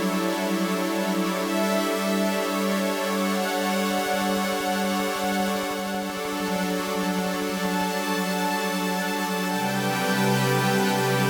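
From 3.91 s to 7.82 s a train of clicks runs over the sound: some fifty near-identical ticks at a steady 12.8 per second, each poking out a few decibels above the audio and audible in the quieter gaps too. The likely cause is an outside pulse source, such as interference from nearby equipment or a faulty connection or power supply. The regular spacing and uniform shape set it apart from random crackle, and the stop after about four seconds sets it apart from a continuous buzz.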